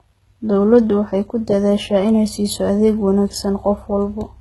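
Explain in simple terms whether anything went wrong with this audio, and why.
The speech was most likely squeezed through heavy HE-AAC compression, which keeps only the lower sounds and fakes the treble by copying them upward. Throughout the clip, s sounds come out gritty and lispy, the top sounds artificial, and nothing remains above about 11.8 kHz.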